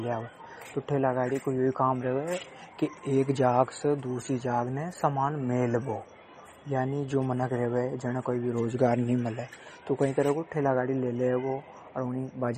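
Throughout the speech, the treble stops dead at 15.7 kHz and the sound has a plainly audible watery swirl, likely from MP3 compression at a bitrate near 32 kbps. A spectrogram shows a hard ceiling with flickering, patchy gaps below it.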